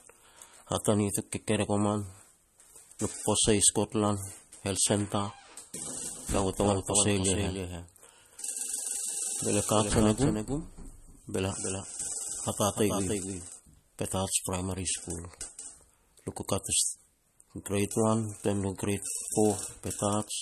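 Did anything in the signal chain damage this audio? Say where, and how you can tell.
Yes. At the codec stage the whole clip carries MP3 compression damage, and it is plainly audible. Nothing remains above 12.6 kHz, so the treble stops at a hard ceiling. The speech sounds watery and swirly. Sibilants chirp metallically and consonant attacks smear. That happens when a starved encoder zeroes weak frequency lines, which flicker on and off between frames. The depth of damage points to a low bitrate, about 40 kbps.

From 5.86 s to 13.60 s there is a doubled audio track. A second full-band copy of the speech trails the original by roughly a third of a second, about 5 dB quieter. It has no reverb tail or room colour, so it is not an acoustic echo. It begins and ends abruptly at those two times. The likely stage is capture or editing: a second, slower path recorded the same signal, or an edit left two out-of-step copies overlapping.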